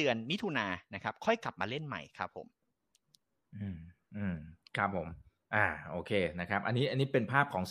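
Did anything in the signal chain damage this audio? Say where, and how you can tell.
No, nothing along the signal chain can be heard damaging this speech recording at any stage from capture to playback.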